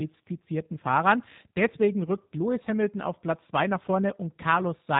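From start to finish the speech has that G.729 codec sound: nothing above roughly 3.8 kHz, and a plainly rough, slightly synthetic texture. The speech is being rebuilt from a vocal-tract filter, a pitch predictor and a few pulses per frame, which fits G.729A at 8 kbit/s.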